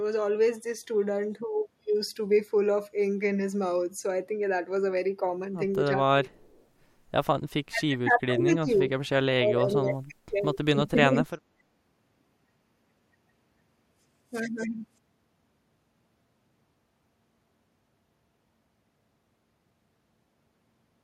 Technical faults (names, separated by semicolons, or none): speech suppressed in double talk; echo leak